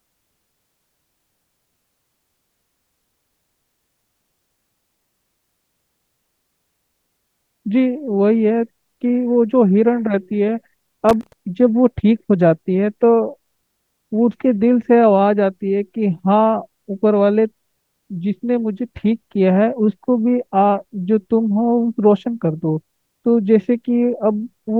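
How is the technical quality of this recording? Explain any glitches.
One glitch stands out in this speech recording: loose connector crackle from 11.09 to 11.33 s. For roughly a quarter of a second the audio breaks into an irregular burst of scratchy crackle, with the signal sputtering in and out. A worn or dirty contact in the cable or jack is making and losing connection as it shifts, chopping the signal into fragments, and any DC sitting on the line turns each reconnection into a pop.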